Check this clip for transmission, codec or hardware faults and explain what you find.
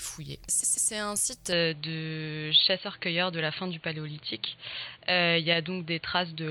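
Two faults turn up.

Repeated frames, 0.62 to 0.90 s: a stutter, with a roughly 129 ms block playing three times over. The duplicated compressed data adds about 0.28 s to the audio.

Input switched to a poorer device, from 1.53 s to the end: the sound abruptly turns dull and boxy, with nothing above 4.5 kHz, a small level shift and faint new background hiss. The likely cause is a move to a narrower-band microphone.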